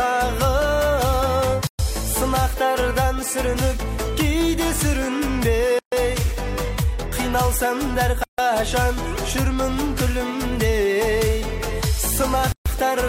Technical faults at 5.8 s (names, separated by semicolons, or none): gap at a join of encoded pieces